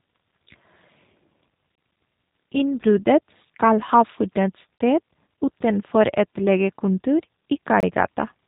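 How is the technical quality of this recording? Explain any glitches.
The quality is limited, with two faults. Throughout, the speech carries G.729 codec damage at 8 kbit/s: content is cut above 3.8 kHz, giving a rough, synthetic tone, and the spectrogram is blank above that line. Three gaps between chunks, each about 25 ms long, fall at 1.75, 4.78 and 7.80 s, every 3 s. There the audio stops and restarts abruptly, leaving hard-edged flat stretches in the waveform and thin vertical blank strips in the spectrogram.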